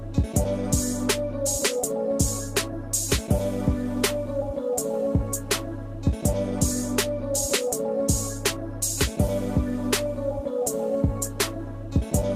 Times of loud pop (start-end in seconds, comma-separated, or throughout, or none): none